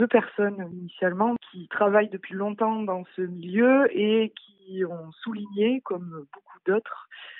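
No technical faults can be heard anywhere in the audio, and the signal holds steady throughout.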